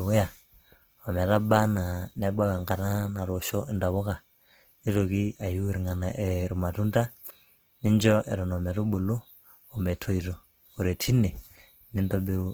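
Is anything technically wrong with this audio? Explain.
Yes. Throughout the speech, the sound is grainy and rough, with a noisy texture on sustained sounds, though the top end still reaches about 20.2 kHz. This is likely Opus compression in its CELT mode, filling starved bands with folded or noise content, which fits a low bitrate around 16 kbps.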